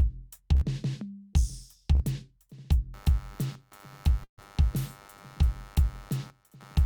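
At 0.55 s and again at 1.95 s the music briefly freezes into a held, fading tone before jumping ahead. These are bursts of packet loss: about 60 ms and then 40 ms of audio never arrived, so the receiver stretched the last sound to fill the hole.

From 2.94 s to the end, a buzzing, chirping layer runs underneath, pulsing at roughly a hundred times per second and sitting about 25 dB below the music. This is computer activity noise, with processor or graphics load disturbing the audio circuit's shared ground, so the noise follows the machine rather than the music.

At 4.24 s a longer burst of packet loss occurs. The held sound stretches for about 140 ms, and its last part dies away to silence before the music picks up at 4.40 s with that stretch missing.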